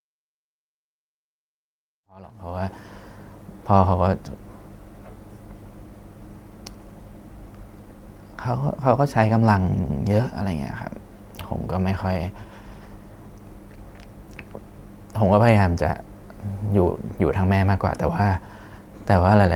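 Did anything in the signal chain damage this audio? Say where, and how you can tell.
No, nothing in the signal chain has damaged this speech recording. The only processing that can be heard is a smooth editor's fade-in, rising from around 2 s to full level at 3.1 s with no click or hard edge.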